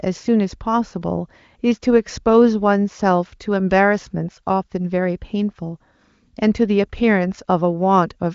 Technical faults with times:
none

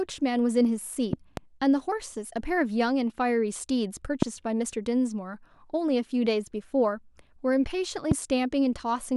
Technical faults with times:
1.13-1.39 loud pop
4.22-4.25 loud pop
8.11-8.14 loud pop

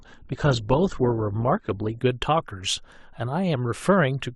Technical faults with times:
0.00-2.00 adaptive stream starting at a low bitrate

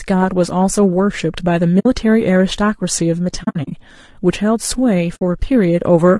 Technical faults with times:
0.00-6.19 low-delay AAC compression
1.79-1.86 AAC frame loss with muting
3.43-3.72 AAC frame loss with muting
5.15-5.22 AAC frame loss with muting

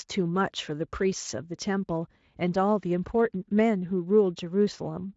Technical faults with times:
none

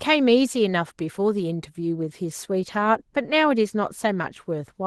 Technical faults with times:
0.00-4.87 Opus voice compression

